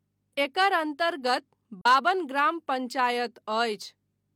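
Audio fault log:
1.81–1.86 s, AAC frame loss with muting: a soft 43 ms dropout just before "बाबन ग्राम", fitting one lost frame zeroed, faded by overlapping windows.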